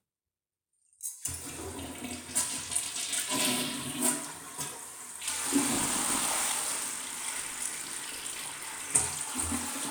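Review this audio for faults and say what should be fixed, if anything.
Buffer tearing runs from 5.74 to 8.85 s, heard as a steady robotic rattle at 50 Hz laid over the sound. The writer filling the ring buffer and the hardware reading it have drifted out of step, so their positions cross inside every 20 ms period. A little under half of each period replays audio from roughly 40 ms earlier, spliced in with hard joins at both edges. To prevent it, keep the writer a fixed margin ahead of the read pointer and resynchronise on underrun.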